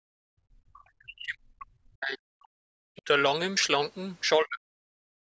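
DC offset runs through the whole clip: the waveform sits shifted off zero by a constant amount. It is inaudible as such, but it wastes headroom and shows up as steady energy at the very bottom of the spectrum.

Speech suppressed in double talk: the speech dips sharply from 0.00 to 0.04 s, again for most of the stretch from 0.27 to 2.77 s, and later from 4.38 to 4.87 s, falling by about 40 dB at worst. The likely cause is an echo canceller that could not tell the talker from loudspeaker echo while both sides spoke, so it pulled everything down.

Other side's voice leaking through at 2.96 to 3.02 s: a brief scrap of a second voice slips in, roughly 25 dB below the main speech. The likely cause is echo the canceller failed to remove, the far end's loudspeaker sound picked up again by the microphone.

Background gated by the echo canceller from 5.15 s to the end at 5.32 s: the room sound drops away by about 36 dB. 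While the loudspeaker played, the canceller clamped the microphone hard, cutting the ambience until it released.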